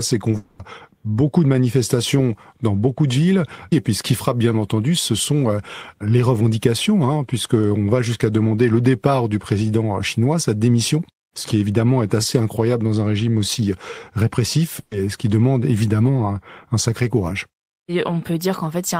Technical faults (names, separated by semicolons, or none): short concealed packet loss; long network dropout; burst of packet loss